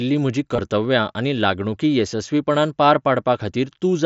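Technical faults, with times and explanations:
0.56–0.58 s, concealed Bluetooth headset packet loss: about 22 ms (likely three frames) refilled by repeating recent waveform, giving a brief buzz; copied cycles on the waveform, frozen harmonic stripes on the spectrogram.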